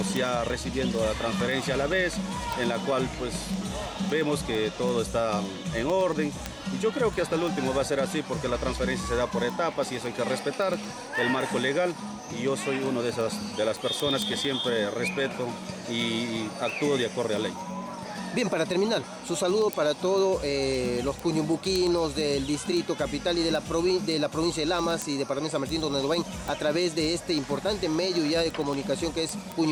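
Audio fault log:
0.16–29.63 s word clock ticks: sharp ticks of uneven strength, about ten per second, from a receiver clock drifting roughly 200 ppm against the sender and slipping one sample at each crossing. Spectrogram shows evenly spaced thin broadband vertical lines; waveform shows brief spikes a few samples long.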